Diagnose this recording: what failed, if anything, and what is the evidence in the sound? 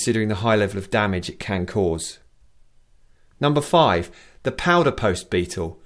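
Nothing failed: no stage in the chain, from wiring and conversion through buffering, processing, transport and storage to playback, leaves any audible mark on this audio.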